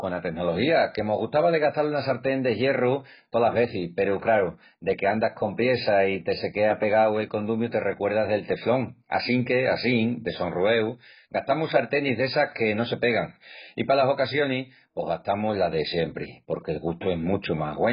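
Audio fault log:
Throughout: AAC compression. The speech sounds dull and smeared, with nothing above about 5.1 kHz and a warbling, fizzy texture on sustained vowels and sibilants. This is likely heavy AAC-LC coding near 12 kbps, which lowers the cut-off and coarsely quantises what remains.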